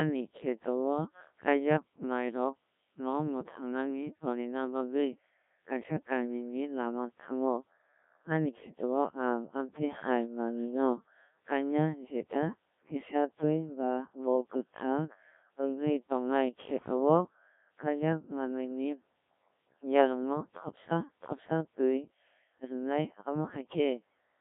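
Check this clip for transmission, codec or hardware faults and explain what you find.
One fault runs through the whole clip: Codec 2 vocoder coding. From start to finish the speech sounds robotic and buzzy, confined to roughly 150 Hz to 3.6 kHz, with heavy damage. The decoder rebuilds the voice from sine waves using only pitch, voicing, energy and a spectral outline, so the original waveform is gone. The damage fits a rate near 1.3 kbit/s.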